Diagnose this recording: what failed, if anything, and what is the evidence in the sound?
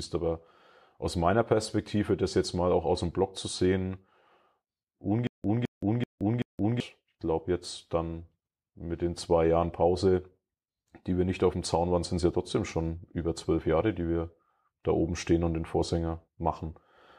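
The failure is a stutter with silent gaps in the speech between 5.27 and 6.80 s, just before "ich glaube jetzt dann". A 211 ms fragment repeats four times, each followed by 172 ms of digital silence, giving a steady 383 ms cycle. On a spectrogram this shows as identical blocks separated by fully blank columns. The likely cause is a stalled playback or stream buffer that replayed its last fragment at each retry, so the intended audio is lost.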